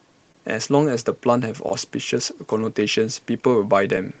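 Throughout the clip there is clock drift between sender and receiver: the sender's clock runs roughly 2% slow, so the jitter buffer keeps draining and the receiver must repeatedly stretch or patch the speech to stay fed. The result is small timing hiccups scattered unevenly across the whole clip, brief moments where the pacing of the speech catches or lengthens slightly, heard through a call codec whose top end stops around 8 kHz, as Opus at a modest bitrate would.

At 0.32 to 0.35 s, and again at 2.61 to 2.64 s, there is a short stall from a late packet. Each time a packet missed its slot, the buffer ran empty, and the receiver held the last sound for about 25 ms and then about 18 ms until the data arrived, resuming where it had stopped. Nothing is lost, but the sound at each point hangs on a touch too long, with a faint buzzy or dipped quality.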